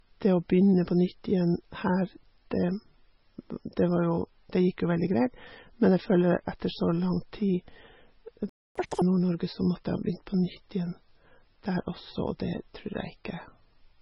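From start to finish the speech carries heavy MP3 compression damage, with the likely cause an encoder starved of bits, at a rate that points to somewhere below 20 kbps. Weak frequency lines drop in and out between frames, leaving a patchy, speckled texture. To the ear the voice sounds watery and swirly, s sounds chirp metallically, and consonant onsets are smeared.

At 8.49 s the sound cuts off mid-flow for 261 ms, until 8.76 s. This is a playback stall, with the likely cause a player that ran dry of data or whose audio thread was held up, so the output fell silent until it recovered. On a waveform this is a flat line with abrupt edges on both sides, and on a spectrogram a clean vertical blank band through every frequency.

Playback resumes at 8.76 s and runs at double speed until 9.02 s. This is catch-up at higher speed: the player resamples its backlog to win back all of the lost time. 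Because resampling raises speed and pitch together, the voice jumps up by roughly ten semitones and sounds chipmunk-like for that quarter second before returning to normal. On a spectrogram the harmonics spread upward and pack tightly in time over that stretch.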